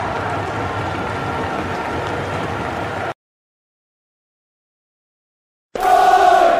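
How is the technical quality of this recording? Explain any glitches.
No audible glitches or faults.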